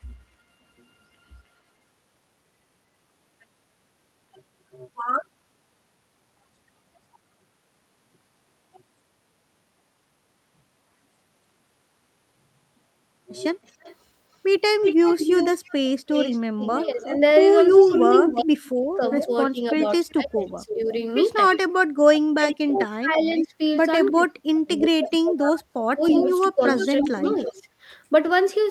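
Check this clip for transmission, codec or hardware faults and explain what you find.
Two faults are audible in this speech, both pointing to a loudspeaker-side echo canceller struggling through the second half of the call.

Echo leak, 13.65 to 27.53 s: the far end's echo canceller likely failed to remove what its microphone picked up from the loudspeaker, so the sound was sent back. A copy trails the talker by 330 ms, only a few dB below the direct speech.

Speech suppressed in double talk, 16.95 to 20.88 s and 22.33 to 27.64 s: when both sides spoke at once, the canceller likely could not separate talker from echo and attenuated both. The voice dips very deeply, roughly 40 dB at worst in the first stretch and 30 dB in the second. It drops out in pieces totalling around one and a half and three seconds.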